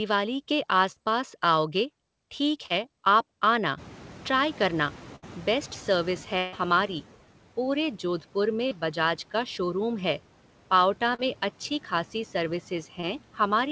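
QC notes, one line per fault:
0.92–0.98 s, 2.66–2.72 s, 8.69–8.73 s, 11.15–11.21 s, 13.01–13.04 s: short concealed packet loss. Each time, 20 to 40 ms of audio arrived too late. The decoder filled the gap by extending the preceding sound and then crossfading back, which leaves a brief smear or wobble. The second gap follows "पास आओगे ठीक", and the third falls between "पूरे जोधपुर" and "बजाज का शोरूम है".
3.77–6.96 s: noise suppressor catching up. Room noise jumps by about 21 dB near 4 s, and the suppressor's noise estimate lags behind it. The hiss first comes through with less reduction, then sinks by about 8 dB over roughly 3.2 s, settling before "पूरे जोधपुर".
5.16–5.24 s and 6.38–6.55 s: burst of packet loss. Consecutive packets, about 60 ms and then 140 ms, never arrived in time. The receiver held the last sound and faded it rather than going silent, producing a held buzz or fading hiss. 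The audio then resumes with that stretch missing.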